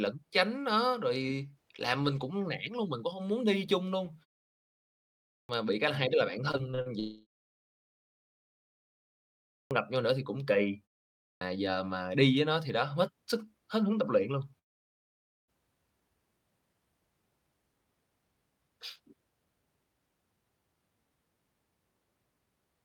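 At 5.38 to 5.49 s the speech bursts abruptly out of a 1.2 s silence with its first 0.11 s missing. This is a clipped start after a pause: the output device had dozed off during the quiet and was still waking when the sound resumed.

Just after "hai đứa là bản", from 6.51 to 6.88 s, the speech turns choppy and robotic. This is repeated packet loss: five short holes, the longest 40 ms, were each patched by stretching the last sound, so about a third of that span is filler.

From 7.0 to 9.29 s the sound smears into a fading buzz and then about 1.9 s of near silence, and roughly 2.3 s of speech never returns. The likely cause is a long network dropout.

Another clipped start follows at 9.6 to 9.71 s, after a 2.4 s pause. About 0.11 s is lost just before "gặp nhau nữa thì".

A third clipped start comes at 11.3 to 11.41 s, after only a 0.5 s pause, between "nữa thì cũng kỳ" and "giờ mà đi với". 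Again about 0.11 s of onset is swallowed.

From 14.59 to 15.5 s the audio goes almost entirely silent, with about 0.9 s missing. This is again likely a long network dropout.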